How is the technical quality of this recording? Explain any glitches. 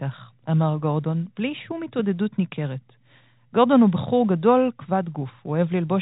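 No glitches or faults heard.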